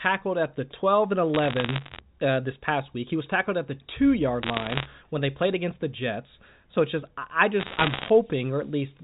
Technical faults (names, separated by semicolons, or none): bit errors on a digital phone line